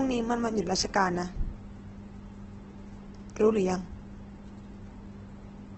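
From start to finish the speech is grainy and rough, with a noisy texture over voiced sounds and nothing above about 8.2 kHz. This is likely heavy Opus compression in its music (CELT) mode at a rate that points to roughly 12 kbps. With so few bits, the encoder keeps each band's energy but fills the detail with folded or noise content, and it narrows the bandwidth to wideband.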